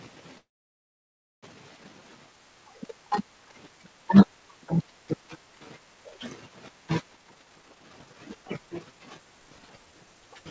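Call audio freeze runs from 0.38 to 1.45 s in this speech recording. The sound stalls for about 1.05 s, briefly carrying on the last sound before dropping to silence for nearly a second. When it resumes it continues from where it stopped, so nothing is lost but about 1.05 s of extra delay is added. This is likely a delivery stall that drained the jitter buffer. Jitter buffer speed-up follows from 7.14 to 10.36 s, where the speech runs at about 132% speed with the pitch unchanged. The receiver repeatedly cut out short pitch-period slices, around a second in total, to shed the built-up delay, which makes the talking sound hurried. The call path shows nothing above 8 kHz, consistent with a G.722 wideband codec.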